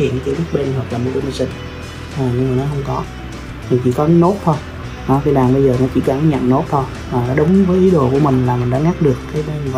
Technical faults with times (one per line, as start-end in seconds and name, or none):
1.51 overlap between stream segments
5.49 overlap between stream segments
7.48 overlap between stream segments